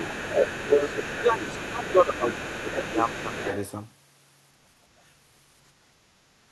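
From 0 to 1.21 s a second voice runs underneath the speech, only about 5 dB below it. This is the other side's voice leaking through, likely from loudspeaker playback that the echo canceller failed to remove from the microphone. Within that stretch, from 0.08 to 0.27 s, the main speech dips by up to about 15 dB. This is speech suppressed in double talk: with both voices present, the canceller likely could not tell them apart and attenuated everything.

The same suppression returns from 1.19 to 2.99 s. Around a second of speech is pulled down in pieces, again by up to about 15 dB. During this window the other side's voice leaks through twice more, faintly at about 20 dB below the speech from 1.38 to 1.92 s, then at about 15 dB below from 2.13 to 3.71 s. Both leaks likely come from the same incomplete echo cancellation.

From 6.22 to 6.43 s the room sound drops by about 6 dB and then recovers. 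This is background gated by the echo canceller, which clamped the microphone for about 200 ms while it treated the input as loudspeaker echo and then released it.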